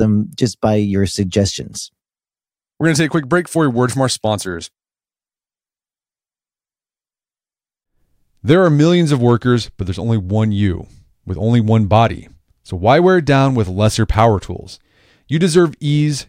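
No technical fault can be heard anywhere in the recording; the signal stays steady and intact throughout.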